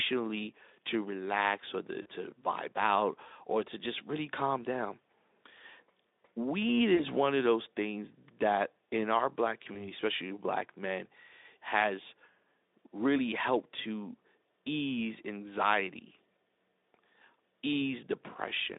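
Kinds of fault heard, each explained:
VoIP packet loss concealed by the speech codec: Packets were lost, and the decoder stretched its last pitch and filter at falling gain. Speech turns briefly into a buzzy tone or fading coloured noise at 2.02 s, 6.95 s and 9.73 s. Each time it regains strength only gradually.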